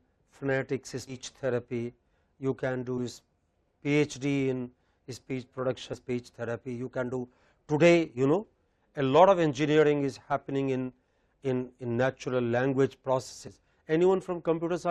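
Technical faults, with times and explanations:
1.07–1.14 s, 2.97 s, 5.93–5.96 s, 13.47–13.50 s: compressed frames skipped. The audio jumps ahead by about 100, 20, 100 and 70 ms, consistent with whole 20 ms frames being dropped.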